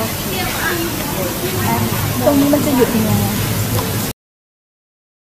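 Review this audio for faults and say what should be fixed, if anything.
A cut-off end occurs at 4.11 s: the sound stops mid-event and drops straight to digital silence that runs to the end, because the final buffers were never written or played. Unlike a fade-out or natural ending, there is no decay tail at all. Prevent it by flushing and draining all pending buffers before closing the stream or file.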